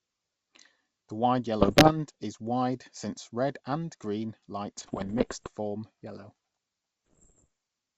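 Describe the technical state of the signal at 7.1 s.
At 7.1 s you're inside a stretch of bit errors on an ADPCM link, 7.07 to 7.47 s. About one bit in a hundred flips, knocking the decoder's step size and predictor off, so you get pops and rough, wobbly-level bursts over the G.722 speech.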